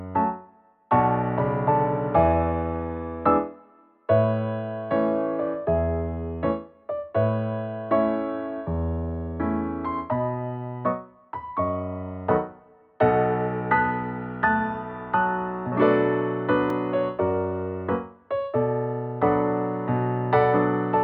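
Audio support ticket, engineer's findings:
Block of digital silence at 16.70 s, about 2.7 ms long, heard as a single tick. Probable component: output buffer fill. The program missed its deadline, so zeros were played, with hard edges at both ends. Gap length fits a 128-sample buffer.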